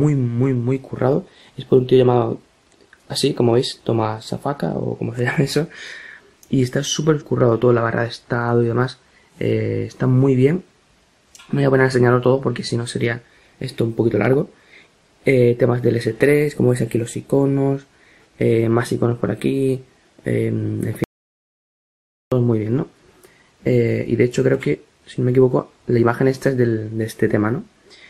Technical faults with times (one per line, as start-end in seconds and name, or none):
21.04-22.32 audio dropout to silence